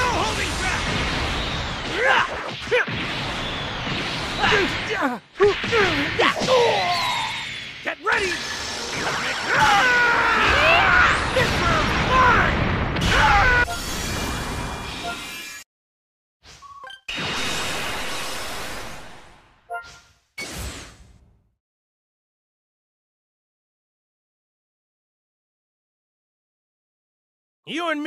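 At 8.03 s there is an underrun with held sample: the output buffer ran dry for 0.45 ms and the converter froze on its last value, leaving a brief flat step rather than a drop to silence. About half a millisecond of audio was lost.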